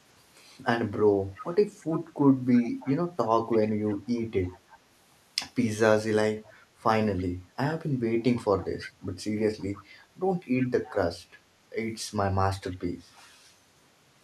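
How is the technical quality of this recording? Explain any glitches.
Recurring echo leak degrades the speech: a delayed copy of the voice returns 330 ms later, at 1.35–4.78, 6.44–7.24, 8.22–9.84, 10.85–10.94 and 12.54–13.23 s. Its level varies from quite audible to barely there. This is likely a far-end speakerphone whose echo canceller let its own playback back through.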